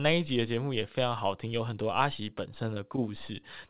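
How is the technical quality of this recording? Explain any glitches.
The speech has one audible glitch, heard through a narrowband call path where nothing reaches above 4 kHz, which fits G.711 telephone coding.

From 2.74 to 2.78 s, a sound is held slightly too long, with a faint buzzy smear as it drags. This is a short stall from a late packet. The packet missed its playout time, the jitter buffer ran dry, and the receiver stretched the last audio by about 19 ms until it arrived. Playback then resumed where it left off, so nothing was lost, but everything afterward runs about 19 ms later.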